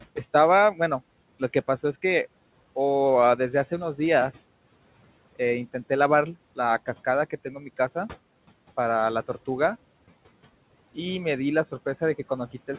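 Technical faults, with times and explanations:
7.3–7.78 s, speech cut by the noise suppressor: about 150 ms of quiet speech got mistaken for background and pulled down by up to about 12 dB, so those bits sound swallowed and faint against the call path's narrowband, nothing-above-4 kHz sound.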